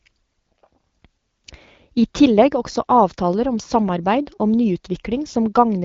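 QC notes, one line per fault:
No faults are audible in this speech clip. The AMR wideband (HD Voice) codec path is working normally, with the audio band topping out near 7 kHz and light coding traces that fit a rate of about 12.65 kbit/s.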